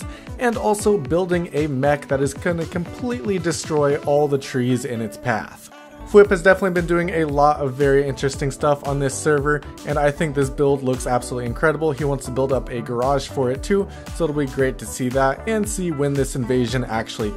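No technical faults are audible anywhere in the recording.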